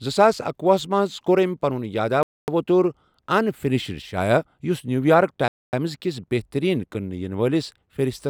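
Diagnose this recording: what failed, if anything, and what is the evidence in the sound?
Chunked playback or delivery failed, leaving a gap between chunks. Hard-edged silences sit at 2.23–2.48 s and 5.48–5.73 s, the second between "یُس نیٛوٗیارٕک" and "کِس بہتٔریٖن". Each lasts 250 ms. The speech is interrupted, not lost. The spacing fits 3-second chunks started late.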